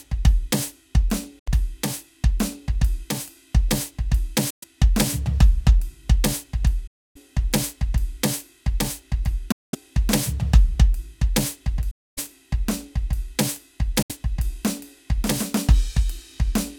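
The music cuts to silence six times, at 1.39, 4.50, 6.87, 9.52, 11.91 and 14.02 s, for 70 to 280 ms each, and then resumes further along as though it had kept playing. This is likely a Bluetooth dropout, where late packets were discarded.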